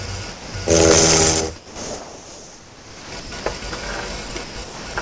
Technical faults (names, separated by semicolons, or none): sound chopped by the voice detector; integer overflow